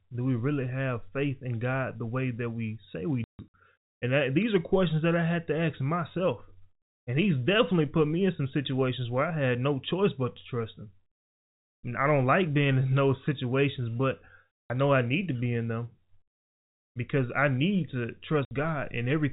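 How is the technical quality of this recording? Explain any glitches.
The recording is narrowband telephone speech, cut off above 4 kHz as G.711 coding does, and it has three silent dropouts.

Packet loss filled with silence: at 3.24–3.54 s, after "that we say we", about 210 ms of sound drops out in scattered holes, the longest 150 ms. At 14.64 s, between "in those situations but" and "know I need to", and at 18.45 s, after "because I need to", 60 ms gaps open. Each hole has hard edges. Lost packets were replaced with silence, and the gap lengths fit 30 ms packets.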